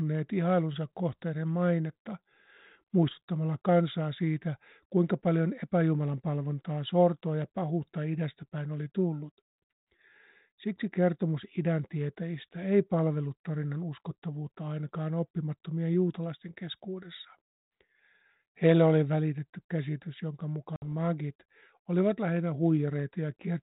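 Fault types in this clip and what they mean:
Packet loss on an ADPCM call: after "oli välitetty käsitys jonka", about 60 ms drops to hard-edged silence, and the decoder's adaptive prediction briefly resettles.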